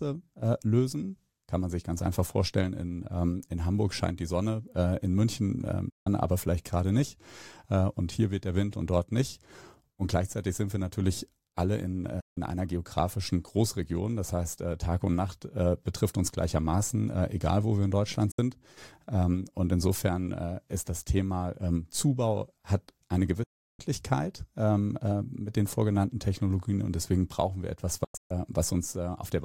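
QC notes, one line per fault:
5.90–6.07 s, digital broadcast dropout: sound fades out over about 8 ms and stays silent for 160 ms, which fits five lost 32 ms frames muted by the receiver.
12.20–12.38 s, digital broadcast dropout: same 160 ms mute right after "wir natürlich alle in", picking back up at "einer geografischen", so whatever came between is simply gone.
18.31–18.39 s, digital broadcast dropout: a shorter 64 ms hole, roughly two frames' worth, with the same quick 8 ms fade into silence before the signal recovers.
23.43–23.80 s, digital broadcast dropout: the longest one, about 352 ms of silence right after "hat eine", consistent with eleven consecutive frames failing and the receiver muting.
28.04–28.31 s, digital broadcast dropout: after "deswegen brauchen wir etwas" it breaks into several short holes, 224 ms lost across about 256 ms, the longest gap 128 ms.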